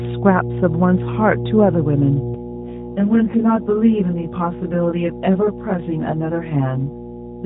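Mains hum at 60 Hz runs through the whole clip, a steady low tone only about 5 dB below the speech, consistent with a ground loop or a nearby transformer.

From 2.34 s to the end, channel delay (comb filtering) appears. One channel lags the other by roughly 20 ms, and summing them to mono carves fixed notches from about 20 Hz upward, giving a rough, slightly doubled sound.

Between 2.50 s and 3.68 s, an AMR rate drop takes the mobile codec from 12.2 to 5.9 kbps. The bandwidth stays the same, but the speech turns buzzier and more synthetic than the lightly coded surrounding audio.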